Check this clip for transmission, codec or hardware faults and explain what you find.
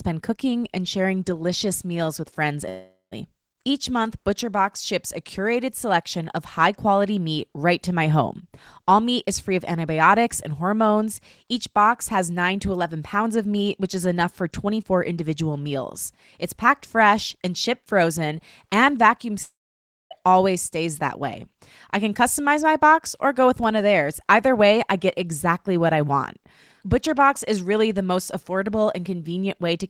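Two long network dropouts and one DC step are audible in this speech.

Long network dropouts: After "delicious meals with friends" at 2.69 s, about 420 ms of audio is lost until 3.16 s. After "shipped frozen and vacuum" at 19.43 s, 680 ms is lost until 20.13 s, before "it always stays that". The likely cause is packets that never arrived. The receiver stretches the last sound into a fading buzz. Then silence follows: 150 ms in the first gap and 580 ms in the second.

DC step: At 23.64 s, between "box or go with" and "of theirs", the waveform's zero line suddenly jumps. You hear a low thump. The speech itself carries on unchanged. The offset then decays away, as a 20 Hz high-pass filter gradually pulls it back to zero.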